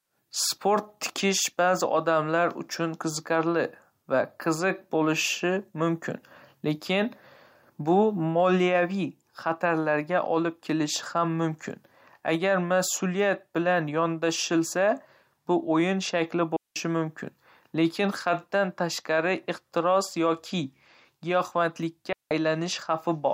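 Digital wireless dropouts at 16.56 s and 22.13 s: the receiver mutes for 195 ms and 182 ms, leaving clean near-silent holes in the speech, with no noise bursts.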